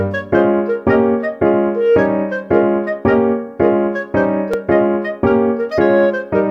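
A single repeated buffer occurs at 4.54 s. One short block of audio, about 5 ms long and consistent with a 5 ms buffer, plays twice because fresh data arrived late. The repeat is so brief that it registers as a hard click rather than a stutter.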